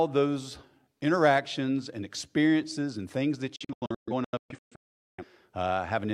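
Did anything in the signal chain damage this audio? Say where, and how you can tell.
Yes: from 3.56 to 5.24 s the speech drops into several silent holes, the longest 0.43 s. That is a digital broadcast dropout, where the receiver muted on corrupt frames.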